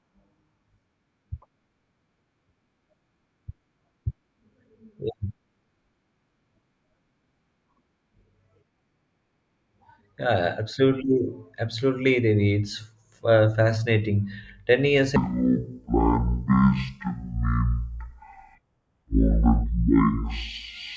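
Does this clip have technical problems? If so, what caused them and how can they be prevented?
Yes. A wrong sample rate fault runs from 15.16 s to the end at 20.96 s. Audio captured at 32 kHz is read out at 16 kHz with no conversion, so each second of recording takes two seconds to play. The speech in that stretch is at half speed and drops a full octave, 12 semitones lower, heavy and dragging. Prevent it by resampling or matching the playback rate to the recorded rate before output.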